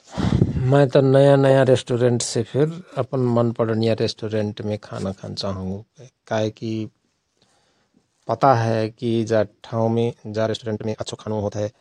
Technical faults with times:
9.93-11.81 time-stretched section

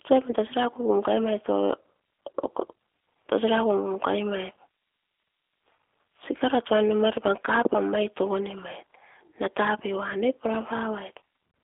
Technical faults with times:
0.00-11.64 G.729 codec
0.31-0.35 VoIP packet loss concealed by the speech codec

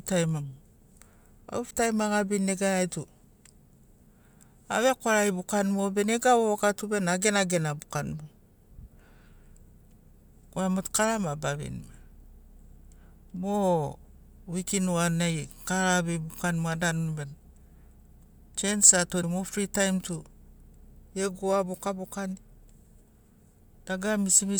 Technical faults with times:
1.69 broken MP3 bit reservoir
19.21-19.24 broken MP3 bit reservoir

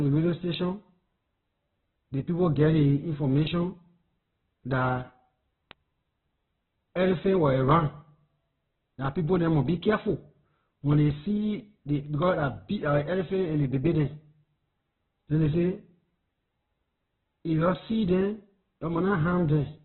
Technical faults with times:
0.00-19.84 Opus compression
0.42-19.49 word clock ticks

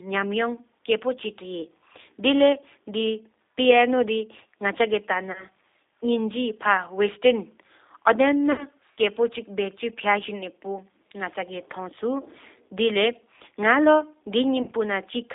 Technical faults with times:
0.00-15.34 G.729 codec
5.32-5.45 VoIP packet loss concealed by the speech codec
8.52-8.66 VoIP packet loss concealed by the speech codec
14.62-14.72 VoIP packet loss concealed by the speech codec

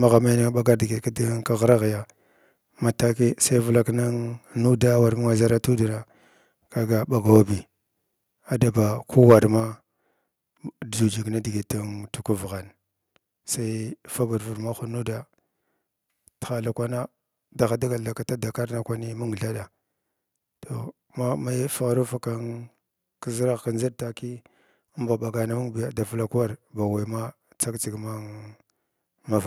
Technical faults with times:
9.23-9.35 microphone overload
9.60 microphone volume stepped down

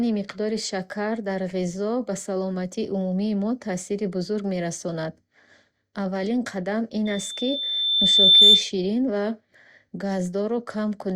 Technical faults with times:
7.05-8.71 loudspeaker feedback squeal

